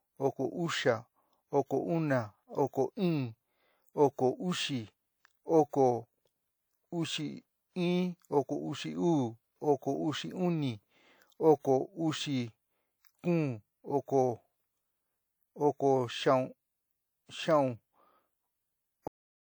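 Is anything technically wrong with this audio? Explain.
Yes, the speech has a cut-off end at 19.08 s. The final stretch of audio was never written out or played back, so the recording loses its last buffers instead of finishing naturally. The speech halts mid-sound at that point, with no decay or fade, and the remaining 0.41 s to the end of the clip is silent. The sudden stop makes the ending feel truncated rather than completed.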